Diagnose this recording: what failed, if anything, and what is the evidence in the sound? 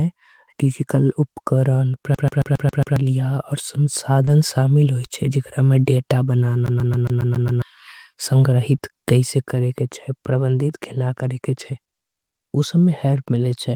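A rapid, even stutter hammers the same 136 ms slice of speech six times from 2.15 to 2.96 s and seven times from 6.66 to 7.62 s, with a tiny mute at each jump. This is playback from disc: a CD stuck on one turn, where a scratch keeps throwing the laser back one track to the same spot.

Brief smears lasting a few hundredths of a second occur at 4.25 to 4.29 s and 8.77 to 8.81 s. These are short concealed packet losses at the network stage. About 20 ms of audio never arrived in time, so the decoder extended the preceding sound to fill the hole and then blended back into the real signal.

Inside the first smear, from 4.27 to 4.29 s, there is no silence, but the sound turns rougher and noisier for about 20 ms. This is a lost packet rebuilt from error correction in the codec: a single packet went missing, and the decoder played the low-bitrate copy carried in the following packet.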